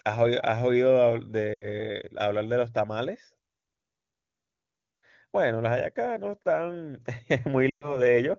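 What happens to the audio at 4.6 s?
Nothing goes wrong at 4.6 s: the speech there is intact, carried cleanly by the AMR wideband (HD Voice) codec at its top rate of 23.85 kbit/s.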